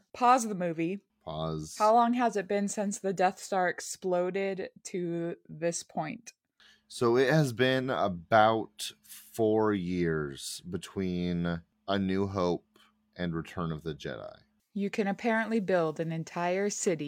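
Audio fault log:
Nothing to log: no faults heard at any point in the speech.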